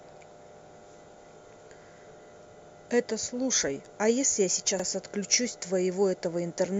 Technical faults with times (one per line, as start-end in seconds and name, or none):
2.25-2.30 overlapping chunks
4.80-4.85 overlapping chunks